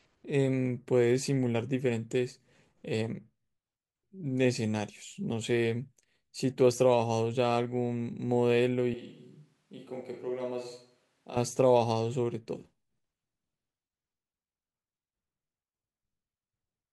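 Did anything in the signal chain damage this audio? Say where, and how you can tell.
Yes: from 8.94 to 11.37 s the speech turns hollow and roomy, about 10 dB quieter with thinner bass, likely a switch to a distant microphone at capture.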